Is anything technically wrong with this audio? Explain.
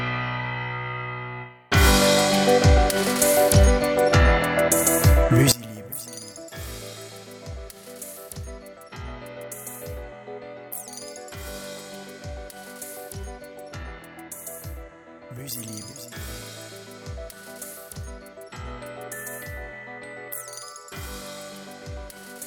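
Yes. From 5.52 s to the end, the sound drops by about 20 dB and turns faint. The likely cause is one channel inverted: reversed polarity makes shared content cancel when summed to mono. The waveform shrinks sharply there, and the spectrogram darkens.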